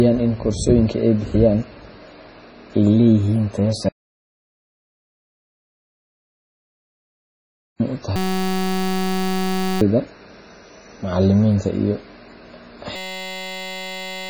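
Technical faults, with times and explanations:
Throughout, MP3 compression. The sound is heavily degraded, with a watery, swirling quality and smeared onsets. Nothing is left above 10.6 kHz, so the treble is cut off sharply. This is likely low-bitrate MP3 encoding, and the damage fits roughly 24 kbps. With so few bits, the encoder drops the top band entirely. Weak frequency components are zeroed and flicker on and off between frames, which causes the swirl and the chirpy sibilants.
3.89 to 7.80 s, audio dropout to silence. The speech cuts off abruptly and about 3.9 s of complete silence follows, with no room tone at all. Then the sound resumes mid-flow. Whatever was said in that gap is lost. The dead silence points to a likely loss of the input signal while recording continued, such as a disconnected device, a failed link or an accidental mute.
8.16 to 9.81 s and 12.96 to 14.29 s, system hang loop. 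In both spans the speech gives way to a steady buzz. A 5.33 ms fragment repeats exactly, so the buzz pitch is 188 Hz. The system froze while the audio hardware kept replaying the same small ring buffer, which fits a 256-sample buffer. The second loop runs to the end of the clip. Each event replaces roughly one and a half seconds of real audio.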